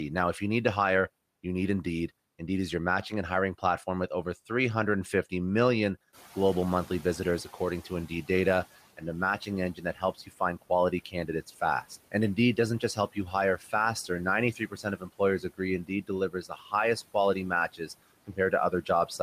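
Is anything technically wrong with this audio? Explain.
Yes. Three kinds of noise suppressor fault can be heard, all in the speech.

Noise suppressor artifacts: throughout, the background pumps down between phrases and swells under the speech. The suppressor is cutting what it judges to be steady noise by about 17 dB, frame by frame.

Noise suppressor catching up: from 6.13 to 8.66 s, the room noise, which jumps about 14 dB near 6 s, comes through too loudly and then fades. The suppressor's noise estimate needed about 2.5 s to adapt, and the reduction ends up near 12 dB.

Speech cut by the noise suppressor: at 9.41–13.73 s, 14.53–16.73 s, 17.72–17.9 s and 18.27 s to the end, soft consonants, word endings or quiet phrases sound swallowed or faint. The suppressor mistook parts of the speech for noise and lowered them by up to about 13 to 17 dB. In the first two spans this adds up to roughly a second and under a second of affected speech.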